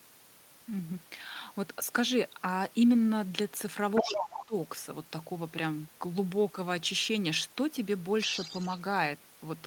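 From 3.95 to 4.45 s you get the other side's voice leaking through, only about 5 dB under the talker. It's likely loudspeaker echo the canceller didn't fully remove. Overlapping that, from 4.03 to 4.55 s, speech gets suppressed in double talk: the talker's level sinks by up to about 20 dB over a little under half a second, likely because the canceller turned everything down while both sides spoke at once. The leak comes back from 8.18 to 8.78 s, quieter this time at around 10 dB below the speech, and again likely residual echo from the talker's loudspeaker playing the far end.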